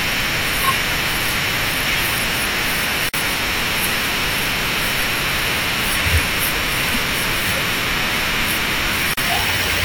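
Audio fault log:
3.09–3.14 s and 9.14–9.17 s, gap at a join of encoded pieces: the speech drops out for about 48 ms, then 37 ms, six seconds apart, with smeared edges. Each piece was likely encoded separately, leaving encoder delay and last-frame padding as silence at the joins.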